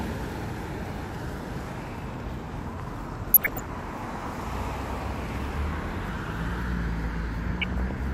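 From 3.24 to 3.82 s, and again from 7.61 to 7.91 s, short blips of noise come through the audio. This is DAB burbling. Weak reception left bit errors, around half a percent, that got past error correction. Wrong samples then put noise into single MP2 sub-bands.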